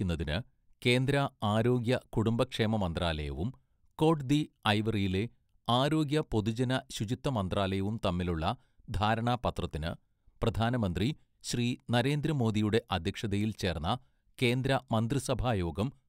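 Nothing goes wrong anywhere in this recording, so there's no technical fault to point to at any moment.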